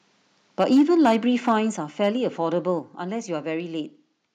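Microphone overload is heard in this speech recording from 0.6 to 1.16 s, again from 1.47 to 1.56 s, and briefly at 2.04 to 2.08 s. The loudest peaks are flattened and take on a harsh, crackly edge, pushing past the converter's limit by about 5, 3 and 1 dB respectively, with around 7, 4 and 3 percent of samples squared off. The likely cause is microphone input gain set high enough that the converter runs out of headroom and cuts off the waveform tops. Microphone volume stepped down is heard at 0.77, 1.77 and 2.79 s, where the voice and room tone drop abruptly by about 2, 6 and 4 dB. Each drop arrives during or shortly after a distorted stretch, which points to the call software likely reacting to the clipping by lowering the device's input level in single jumps rather than by a smooth fade.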